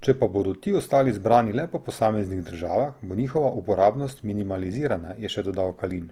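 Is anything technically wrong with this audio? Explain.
Yes. Throughout the speech, tones come across rough, grainy and noisy, though the top end still reaches about 20.2 kHz. The likely cause is Opus compression in its music (CELT) mode, filling bit-starved bands with folded or noise-like content, which fits a bitrate near 24 kbps.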